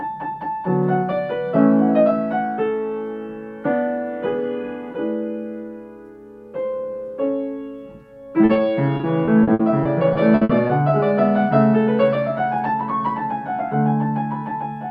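At 8.45 s the sound gives a brief smear, then a small wobble at 8.53 s. This is short concealed packet loss: about 40 ms and then 20 ms of audio arrived too late. The receiver patched each hole by extending the preceding sound and blending it back in.

From 8.97 s to 10.71 s the sound turns choppy, with pieces dropping out. This is repeated packet loss (robotic sound): one hole after another, the longest about 60 ms. Each was filled by continuing the last sound, so roughly a fifth of the stretch is patched.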